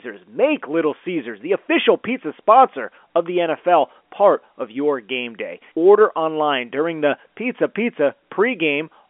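No faults in the speech; the band runs from 250 Hz to 3.4 kHz with nothing above 3.7 kHz, as expected of G.711 A-law telephone coding.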